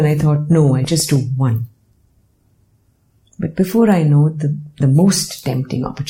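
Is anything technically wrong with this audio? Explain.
Yes, there's a train of clicks from 0.05 to 1.17 s: about seven evenly spaced ticks, roughly 6.3 per second, each about as loud as the sound itself. It's likely a faulty connection or nearby equipment injecting a repeated pulse, heard as steady popping over the audio.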